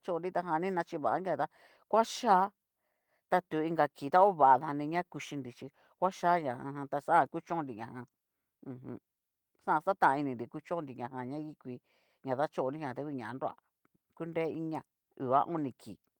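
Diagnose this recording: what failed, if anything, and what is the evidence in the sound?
Nothing in this speech recording has failed at any stage from wiring to playback. The Opus voice compression leaves only light coding traces, and the band reaches about 20.1 kHz, which fits fullband hybrid coding at around 20 kbps.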